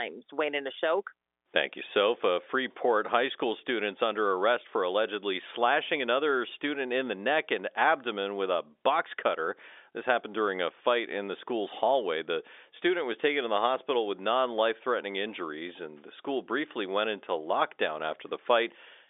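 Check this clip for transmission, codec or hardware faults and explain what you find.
Nothing faulty turns up anywhere in this recording.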